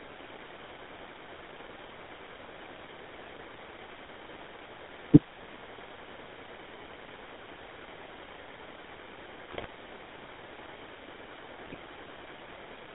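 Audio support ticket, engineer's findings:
GSM full-rate codec, whole clip: regular-pulse excitation with decimated residual and coarse vocal-tract modelling, consistent with 13 kbps full rate. Result is plainly audible buzzy, gravelly roughness on the speech, band-limited to roughly 300 Hz to 3.6 kHz, nothing above.

GSM bit errors, bursts at 3.26–3.31 s, 9.52–9.66 s, 11.67–11.78 s: corrupted bits reaching the decoder, scrambling filter, pitch or gain parameters for a few frames each. Speech breaks into squawks, pops and gargling; the 9.52 s burst is longest and worst.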